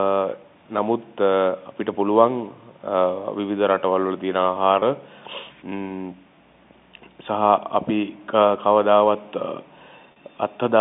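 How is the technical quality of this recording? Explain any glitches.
Two brief dropouts from packet loss with pitch repetition affect this speech recording, heard over a band-limited telephone line consistent with G.711 coding. The first runs from 4.80 to 4.82 s, a 20 ms gap that fits one lost packet. The second runs from 10.12 to 10.16 s, a 40 ms gap that fits two. At each gap the receiver fills in by repeating the last pitch period and fading it down. The result is a slightly held, buzzy sustain where the voice briefly freezes.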